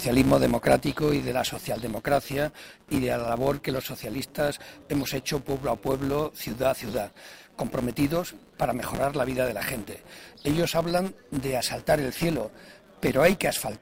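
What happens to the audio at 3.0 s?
Just before that point, at 2.95 s, there is a gap between stream segments. The time stamps of two consecutive segments, which fall at 6-second intervals, do not meet, so the player inserts about 6.4 ms of silence. The result is a brief, hard-edged dropout. Nothing is lost, and everything afterwards arrives that much later.

Underneath, as throughout the clip, there is a filter restarted on every block. Because the filter resets its state at each block boundary, every block opens with a small transient. Those transients form a buzz at about 188 Hz that rises and falls with the signal level, which fits a 256-sample block.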